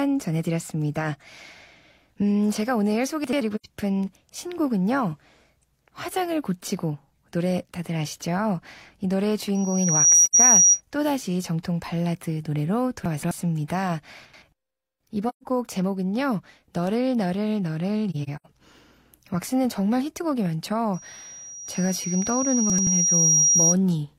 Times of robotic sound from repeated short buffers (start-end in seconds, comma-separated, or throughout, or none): none